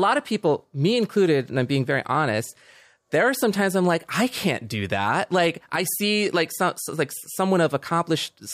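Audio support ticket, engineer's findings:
No faults found in this speech clip.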